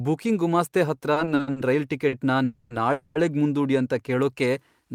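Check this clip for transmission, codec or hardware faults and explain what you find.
Three kinds of network jitter-buffer fault are audible in the speech, with the audio resuming in place each time and nothing lost.

From 1.13 to 1.58 s there are repeated stalls (stutter): five buffer underruns, the longest 60 ms, filled by extending the last sound, so the speech drags and stutters for nearly half that span.

At 2.08 to 2.14 s a short stall from a late packet holds a sound about 40 ms too long while the receiver waits, then continues.

Two call audio freezes, at 2.44 to 2.72 s and 2.92 to 3.29 s, add about 260 ms and 230 ms of fading buzz. These are likely caused by packets held up in transit, and the buzz never drops to full silence.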